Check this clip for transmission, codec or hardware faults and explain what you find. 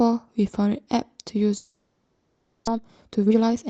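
Two faults are audible in this speech clip, both on a call path whose content stops at about 8 kHz, consistent with a speech codec such as Opus at a low bitrate near 24 kbps.

Long network dropout, 1.57 to 2.69 s: The speech gives way to a smeared, buzzy continuation of the last sound that fades but never drops to true silence. Roughly 0.6 s of speech is simply missing when the audio comes back. The likely cause is a long network dropout during which the receiver synthesised filler from the last good audio. On a spectrogram the band goes flat and repetitive, then blurs and fades. The waveform shows a decaying envelope rather than a clean gap.

Jitter buffer speed-up, 2.73 to 3.69 s: After the audio returns, it plays about 136% fast at unchanged pitch, so it sounds hurried. Having come back with roughly half a second of extra delay, the jitter buffer trimmed short pitch-period chunks repeatedly, removing about 0.4 s in total. 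A spectrogram shows compressed syllables with normal harmonic spacing. The waveform shows tightly packed periods with small splice points.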